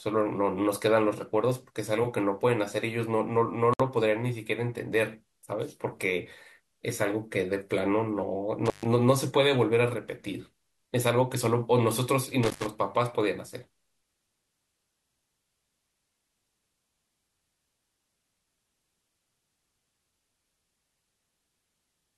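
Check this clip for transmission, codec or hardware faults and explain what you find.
Three faults turn up in this speech recording: one gap at a join of encoded pieces and two dropouts from an intermittent contact.

At 3.74 to 3.80 s, a 61 ms gap at a join of encoded pieces cuts into otherwise continuous speech. Two separately encoded segments were spliced without removing the encoder's leading delay and end-of-stream padding. The waveform shows a flat notch with smeared edges, and the spectrogram shows a thin vertical blank before the sound resumes where it stopped.

At 8.66 s and 12.43 s, intermittent contact opens the line for about 128 ms and 102 ms. A loose plug or cable briefly breaks the connection, so the speech drops out with a crackle at each edge. On the waveform these appear as sharp spikes bracketing a near-flat stretch. The spectrogram shows broadband clicks around a faint noise floor.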